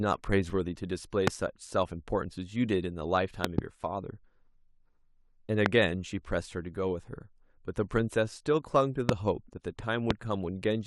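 Speech, marred by two kinds of technical fault. A corrupt frame decoded appears at 0.48–0.52 s as a brief chirp-like blip spanning what sounds like about three codec frames, and again at 9.8 s as a shorter single-frame blip. In each case damaged bits in the compressed stream made the decoder rebuild the frame with wrong gains or misread spectral codes, putting spurious energy, peaking at roughly -30 dBFS, at the wrong frequencies. A loud pop, roughly 25 dB above the surrounding signal, sits on top of the speech at 1.27–1.30 s, 5.66–5.68 s, 9.09–9.11 s and 10.11–10.13 s. At 3.45–3.61 s there are two pops in quick succession. The speech carries on underneath each one. The likely cause is a sudden voltage step or pulse from a plug, switch, static discharge or driver glitch entering the signal chain, with the downstream circuitry shaping each impulse into a short, sharp pop.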